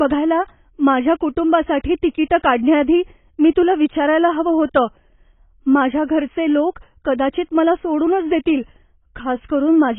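Throughout, the speech is dull and smeared, with nothing above 3.8 kHz and a fizzy warble. Likely heavy AAC compression at a bitrate near 16 kbps.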